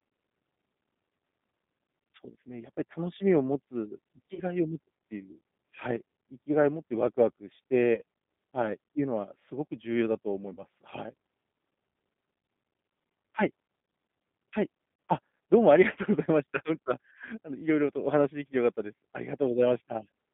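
Speech carried over a G.729 codec throughout: the voice sounds rough and slightly synthetic, which fits a low-rate coder near 8 kbit/s, and on a spectrogram the energy is confined to a band from about 150 Hz to 3.6 kHz, with nothing above and smeared, grainy harmonics inside. VoIP packet loss concealed by the speech codec appears at 4.34–4.41 s, 7.94–8.01 s, 10.54–10.64 s and 12.41–12.44 s. Each gap sounds like about 30 ms of missing audio, consistent with one lost packet, that the decoder fills by stretching the previous sound into a buzzy or noisy, fading sound. On a spectrogram this shows as a flat, repeated harmonic smear. On a waveform the envelope dips, and level and clarity take a little while to recover afterward.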